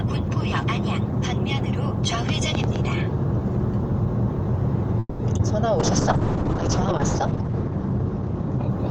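At 4.99 s the sound stops moving forward for about 0.22 s. The last moment carries on as a fading buzz or hiss, ending in a brief silence of about 20 ms. The likely cause is a call audio freeze, where delayed packets left the jitter buffer empty. When the sound resumes, it picks up where it stopped. Nothing is lost, but everything after is about 200 ms late.

At 5.37 s comes short concealed packet loss. About 20 ms of audio never reached the decoder in time. The receiver extended the preceding sound to cover the hole and then blended back. It is heard as a quick smear or wobble lasting around 40 ms.

From 5.8 s to the end there is a call bitrate drop. The encoder's rate falls from 32 kbps to 6 kbps and holds at its lowest for about 1.1 s. The audio bandwidth shrinks from 20 kHz to 8 kHz. The sound turns muffled and coarse, with a rough, watery texture.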